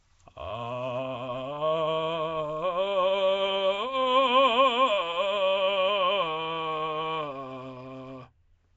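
Throughout the music, a rough hissy halo and smeared, underwater blur sit on everything, with nothing above 7.7 kHz. This is likely Nellymoser compression, consistent with about 32 kbps: starved bands are refilled with noise, giving grainy hiss rather than MP3-style warbling swirls.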